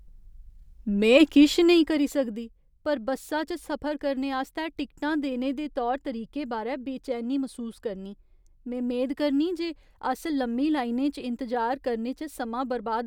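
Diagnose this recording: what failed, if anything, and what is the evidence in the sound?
Zipper noise runs from 1.42 to 2.46 s, just before "पर बस्सा च सफर", as the speech drops by about 10 dB. The gain stage in the buffer path applies the change in coarse unsmoothed steps, around twenty a second, and each jump clicks, giving a ticking zipper under the voice.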